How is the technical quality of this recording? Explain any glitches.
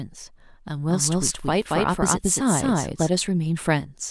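There's one clear glitch: a doubled audio track from about 0.89 s to 3.09 s. For that stretch the speech is heard twice, with a second full-range copy trailing the original by about a fifth of a second at roughly the same loudness. It most likely comes from the same audio being picked up again through a slower path and mixed back in. There's no decay or room tone on the copy, and it cuts in and out abruptly.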